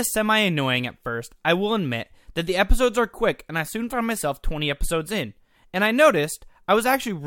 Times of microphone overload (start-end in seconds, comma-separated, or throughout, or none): none